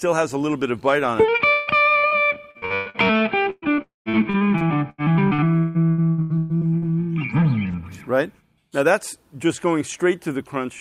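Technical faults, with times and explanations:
1.51 to 1.70 s, long network dropout: about 160 ms of sound goes missing here, and the gap is filled the whole way by the receiver stretching out the last bit it had, so you hear a drawn-out continuation of that sound instead of silence. When things pick up again at 1.70 s, whatever should have been in that stretch just isn't there. The likely cause is a burst of packets failing to arrive.
1.99 to 2.06 s and 2.07 to 2.14 s, short concealed packet loss: two back-to-back holes of about 40 ms each, only 10 ms apart. Each one got patched by carrying the previous sound forward and then blending back into the real audio, so you get a quick smear or wobble, twice in a row. Anything very short that fell in those windows is gone.
2.51 to 2.97 s, repeated packet loss (robotic sound): five separate gaps in under half a second, adding up to about 280 ms missing, the longest about 115 ms. 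Since roughly 59% of this stretch is patched-in continuation rather than real audio, it comes across choppy, with bits dropping out and being papered over one after another.
3.50 to 6.85 s, repeated packet loss (robotic sound): a longer run with 17 gaps totalling about 1.04 s missing, the longest about 164 ms. Concealment covers about 30% of the span, so real audio keeps getting interrupted by short filled-in patches. It sounds choppy over these three-odd seconds, with pieces missing throughout.
3.82 to 4.09 s, long network dropout: this one sits inside the choppy run above. About 240 ms is missing. The receiver carries the last sound forward for a bit, then gives up and goes quiet for about 150 ms before audio resumes, minus the lost part. This is likely a longer stall in packet delivery.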